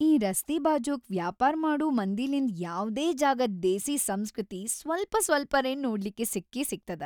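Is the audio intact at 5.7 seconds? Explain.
Yes, the audio is intact at 5.7 seconds, with no dropout, click or distortion to be heard.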